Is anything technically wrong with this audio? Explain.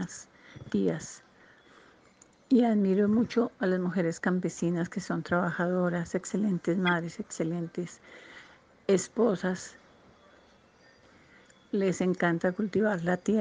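Yes. From 6.87 to 6.93 s there is a brief, fairly loud glitch, peaking around -15 dBFS. This is a corrupt frame decoded: flipped bits in a couple of compressed frames were played anyway, placing energy at wrong frequencies for that moment.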